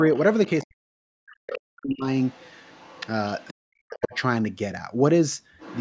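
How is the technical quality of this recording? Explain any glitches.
The recording has two recurring call-path problems.

Other side's voice leaking through: a second voice is audible at 0.15–0.66, 1.47–1.58, 2.2–3.07, 3.4–3.54, 3.96–4.21 and 5.59 s to the end. It is mostly faint, but much stronger around 1.5 s. The likely cause is loudspeaker playback reaching the microphone that the echo canceller didn't fully remove.

Speech suppressed in double talk: the main voice sinks sharply, by around 40 dB at its deepest, across 0.64–2.08 and 3.63–4.14 s, overlapping the leaked voice. The likely cause is the canceller attenuating everything while both sides spoke at once.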